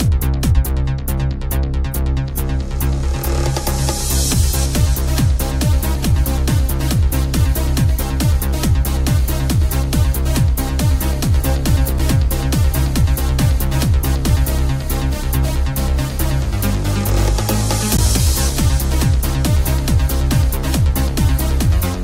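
An underrun with held sample occurs at 17.97 s: the output buffer empties and the converter holds its last value for about 15 ms, so the sound flattens and stops with little or no click. Since no audio is lost, playback resumes where it stopped and the return is soft.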